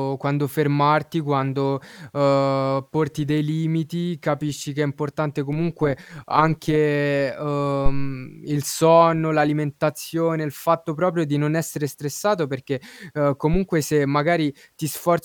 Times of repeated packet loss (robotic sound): none

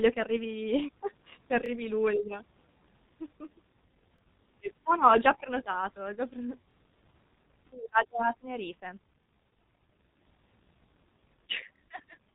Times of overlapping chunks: 1.66-1.68, 4.18-4.21, 6.71-6.73, 9.23-9.26, 11.76-11.78

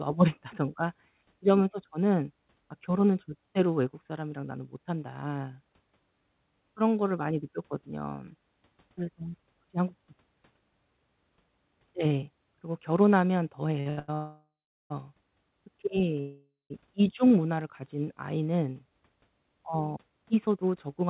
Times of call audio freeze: 14.14-14.92, 16.20-16.72

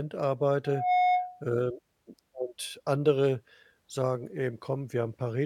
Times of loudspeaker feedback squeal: 0.64-1.47

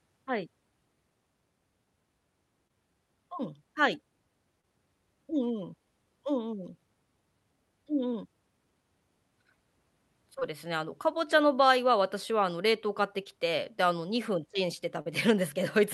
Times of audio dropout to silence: none

